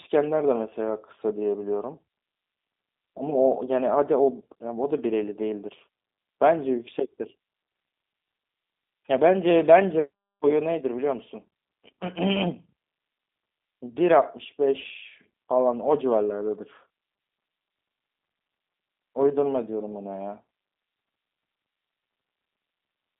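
Across the whole clip the speech has gone through a G.729 codec, which fits an 8 kbit/s G.729A voice link. Nothing above 3.8 kHz survives, and the line band runs from about 250 Hz to 3.7 kHz. What separates this from a simple telephone band-limit is the plainly audible roughness: the voice is rebuilt from a filter model, pitch prediction and a few pulses, giving a buzzy, slightly synthetic grain rather than merely muffled clean sound.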